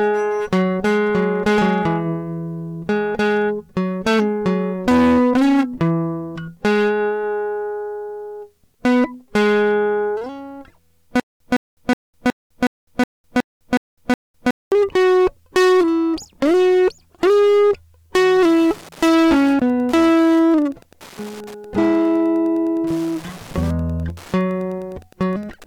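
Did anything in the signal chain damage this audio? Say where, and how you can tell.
Yes. Hard clipping runs through the whole music track. The signal is driven about 12 dB past what a gain stage or converter can pass, so around a tenth of the samples get sheared flat. You hear that as a harsh fuzz on every loud passage.

There's a stutter with silent gaps from 11.20 to 14.72 s. A 163 ms fragment replays nine times, each followed by about 205 ms of dead digital silence, so it repeats every 368 ms. That's likely a playback or stream buffer stalling, and the music that should have filled that stretch is gone.

From 18.24 s to the end there's Wi-Fi interference getting into the analogue wiring. It's a steady tick every 102.4 ms, the beacon rate, sitting about 30 dB below the music, where a nearby radio's bursts are being rectified by the audio circuit.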